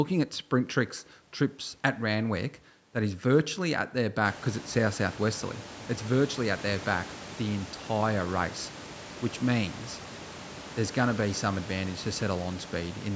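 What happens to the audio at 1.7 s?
Nothing goes wrong at 1.7 s: the speech there comes through intact, with no dropout, glitch or distortion.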